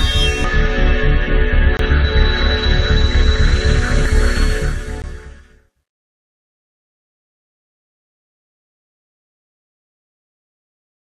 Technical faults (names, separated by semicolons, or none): compressed frames skipped; CD skip